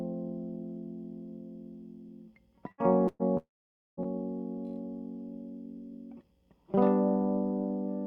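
At 2.71 s the music hits a burst of packet loss. About 60 ms goes missing, and the receiver covers it by stretching the last bit of sound into a short fading smear before the track jumps ahead. At 3.08 s there's a second, longer burst of about 120 ms. The held-over sound drags on and dies away just before the music resumes at 3.22 s, so you hear a tiny dropout where the fill runs out.

Things get worse at 3.37 s, in what's likely a long network dropout. Roughly 600 ms of music never arrives. The receiver keeps the last sound going for a moment and fades it, then there's about half a second of plain silence. The music comes back at 4.00 s, already further along, with everything in that gap simply gone.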